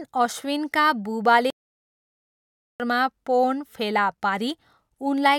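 Speech with a playback stall: the audio cuts to silence from 1.50 to 2.80 s, about 1.3 s, then resumes, likely from the player starving for data.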